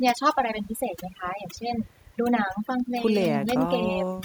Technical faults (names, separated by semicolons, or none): overdone noise removal